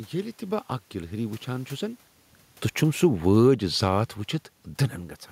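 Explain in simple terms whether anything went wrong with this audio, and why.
Automatic gain falling: from 2.8 to 3.74 s the gain control judged the input too loud or too noisy and turned it down, so speech and background sink together. The level shifts around 2 s and 5 s are the talker moving, not a fault.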